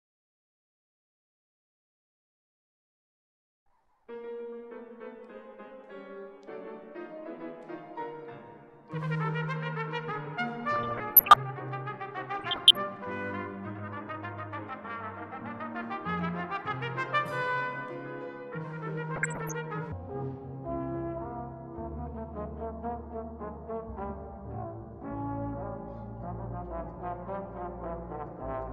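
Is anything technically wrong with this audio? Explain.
Yes. There are two faults.

DAB burbling at 10.66–11.36 s, 12.33–12.79 s and 19.16–19.52 s: residual bit errors under one percent corrupt MP2 sub-band samples and scale factors, producing short blips of noise and level jumps in single sub-bands.

A section at the wrong speed runs from 19.92 s to the end at 0.566 times normal speed, about ten semitones lower and dragging, likely from playback against a mismatched clock.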